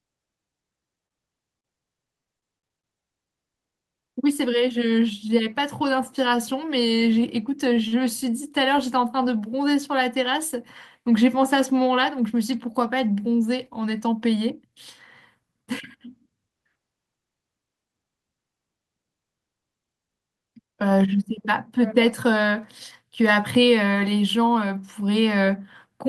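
From 0.95 to 2.86 s the speech turns choppy and robotic, with a rapid series of short holes, the longest 55 ms. This is repeated packet loss, each gap patched by extending the previous sound. From 3.87 to 4.99 s the speech hurries along at 108% speed with unchanged pitch. This is a jitter buffer speed-up: the receiver trimmed short pitch-period slices, about a tenth of a second in total, to cut its backlog. At 7.73 to 7.79 s and again at 7.88 to 7.95 s, sounds are briefly held too long, by 25 ms and 40 ms. These are short stalls from late packets, where the buffer ran dry and the last sound was stretched until the data arrived. From 24.55 to 24.78 s another jitter buffer speed-up rushes the speech to 113%, dropping roughly 40 ms.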